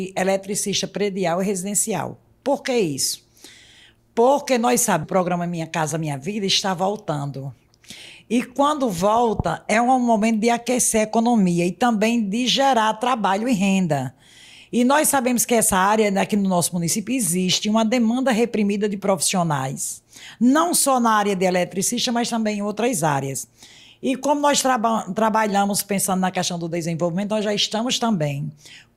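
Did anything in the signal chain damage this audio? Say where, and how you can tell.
Yes. At 5.03 s there is a skip ahead in the network jitter buffer: the sound jumps forward with no silent gap, and roughly 0.4 s of audio is gone, joined nearly seamlessly. A dropout would leave a hole or fill. This simply discards queued audio.

Right after, from 5.13 to 6.32 s, the jitter buffer speed-up follows as the receiver drains its backlog, trimming pitch-period slices for about 109% speed and removing around 100 ms. Pitch holds steady, which distinguishes this from a sample-rate error that would raise pitch too.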